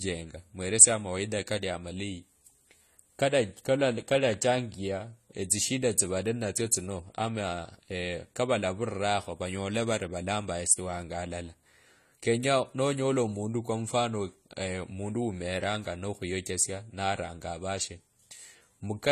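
Throughout the speech the sound is dull and smeared, with a fizzy, warbling edge on sibilants and nothing above 14 kHz, plainly audible codec damage. This is likely AAC compression, AAC-LC at a low bitrate that fits around 32 kbps, discarding high bands and coarsely quantising the rest.

A loud pop cuts in from 4.34 to 4.36 s, and a double pop follows from 15.64 to 15.77 s, after "kwa mfano mundu" and before "nokhuyochesia naranga avashe". Each stands roughly 5 dB above the speech, which carries on underneath. A likely cause is a sudden voltage pulse from a switch, plug or static.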